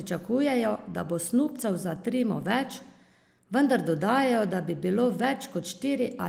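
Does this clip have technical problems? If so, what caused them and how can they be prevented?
No, nothing here needs fixing: the speech has been through Opus voice compression at a moderate rate and keeps its full bandwidth, with only a light touch of coding character, so there's nothing to prevent.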